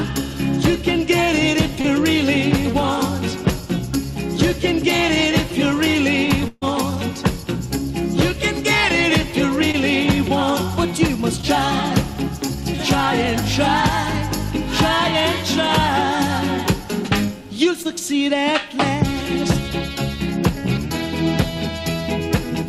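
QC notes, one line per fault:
1.81 s, 9.72 s, 11.41 s, 17.83 s: short concealed packet loss. Each time about 20 ms of audio never arrived, and the receiver papered over it by stretching the preceding sound for roughly 13 to 22 ms before blending back, so you get a tiny smear or wobble rather than a clean dropout.
6.48–6.64 s: burst of packet loss. Around 140 ms went missing in one go, and the concealment carried the last sound forward while turning it down, which ends in a moment of near silence. Playback then picks up later, with that stretch simply gone.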